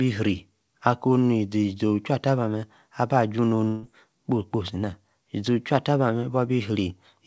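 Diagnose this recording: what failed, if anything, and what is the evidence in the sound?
A burst of packet loss, a network-stage failure, occurs from 3.68 to 3.86 s. For about 150 ms no packets reached the receiver in time, so its concealment extended the last received speech and faded it down instead of leaving a silence. When packets arrive again, the speech resumes about 150 ms further on, and the part in between is missing. The call path's band stops at 8 kHz, which fits a wideband codec such as G.722.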